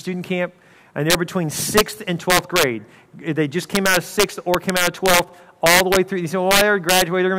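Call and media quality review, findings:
Integer overflow at 1.10–1.15, 1.77–1.81, 2.30–2.63, 3.75–5.19, 5.66–5.97 and 6.51–7.02 s. Violent cracks on loud peaks, harsher than clipping. Gain or mix stage drives peaks about 3 to 6 dB over full scale. Unlimited sum wraps to opposite sign.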